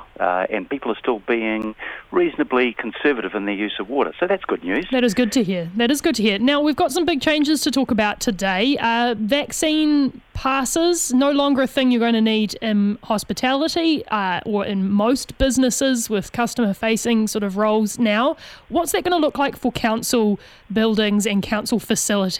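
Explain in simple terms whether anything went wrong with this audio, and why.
At 1.62 s there is a block of digital silence. The sound drops to pure silence for about 12 ms, then returns with no fade. A gap this short sounds like a tick. The gap's length fits a 512-sample buffer that the program didn't fill in time.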